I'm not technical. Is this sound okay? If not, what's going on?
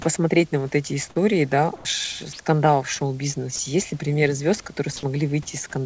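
No, there are two short glitches.

From 1.76 to 1.85 s, the real background behind the speech is briefly replaced by comfort noise in place of the background. For about 90 ms the natural room sound gives way to a flat, featureless hiss that is a little quieter. This is likely the call system pausing transmission during what it judged to be a gap and filling the gap with generated noise, so the line never goes dead.

From 3.56 to 3.59 s, about 30 ms of the speech itself is lost: sound dropped by the voice detector. For that instant the speech is replaced by the same steady synthetic hiss, then it returns. The likely cause is the sender's speech detector mistaking a quiet moment of speech for background and briefly stopping transmission, with the receiving end filling the hole with noise.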